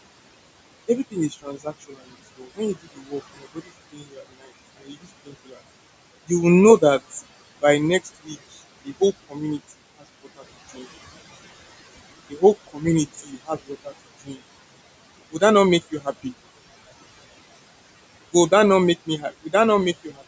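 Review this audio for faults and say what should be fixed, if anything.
Noise suppressor artifacts run through the whole clip. The suppressor pulls down whatever it judges to be steady background by about 20 dB, frame by frame, so the room noise, which sits about 16 dB under the speech, drops away in the gaps and climbs back under each phrase. Unlike plain room noise, this residue pumps in step with the speech rather than holding a constant level. To prevent it, lower the suppression depth or use a gentler, slower-acting noise estimate.

Speech cut by the noise suppressor happens in five stretches. The suppressor mistook parts of the speech for noise and turned them down with the background. From 0.88 to 5.56 s, roughly two seconds in total are affected, with drops of about 20 dB. From 6.27 to 10.86 s, under a second is affected, by about 17 dB. From 12.3 to 14.39 s, under a second is affected, by about 19 dB. 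From 15.32 to 16.33 s, a brief part drops by about 14 dB. From 19.06 to 20.22 s, a short part drops by about 16 dB. In these spans, the affected speech sounds swallowed or faint. This differs from the call's microphone high-pass, which only removes deep bass, and from the band limit, which leaves nothing above 8 kHz. Those are steady across the clip, while these cuts come and go with the quiet parts of the speech. To prevent it, raise the suppressor's speech-protection threshold so low-level speech is not classed as noise.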